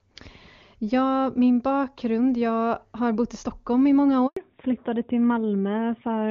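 At 4.27 s, just after "i många", a handover gap cuts the speech for 100 ms while the call switches networks and no frames arrive. The sound dies within milliseconds, leaving a flat, empty stretch on the waveform and a blank vertical band on the spectrogram.

From 4.37 s to the end, the call stays in fallback to narrowband, moving from HD Voice at a level consistent with 23.85 kbit/s AMR-WB to narrowband AMR. Nothing remains above 4 kHz, so the voice turns duller and flatter. On the spectrogram, the upper energy stops abruptly at a hard 4 kHz ceiling.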